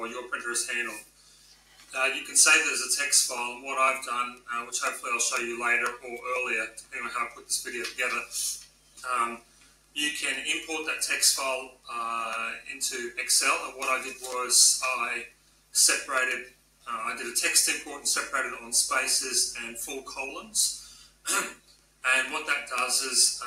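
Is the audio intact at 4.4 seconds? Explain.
No. At 4.4 seconds the audio is affected by a noise suppressor applied to music or sounds, and this runs through the whole clip. The processing was built for speech. It treats steady tones, ambience and reverb as noise and pulls them down. Attacks pass through, but sustained parts and decays sink. The level swings by about 10 dB. The result is pumping and fluttering, with the sound thinning out between onsets.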